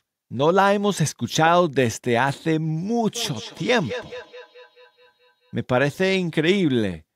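Feedback echo between two devices runs from 3.15 to 5.58 s: the speech returns roughly every fifth of a second, peaking about 16 dB below the speech, because a second device in the room replays the call and the first microphone recaptures it beyond its own echo canceller's reach.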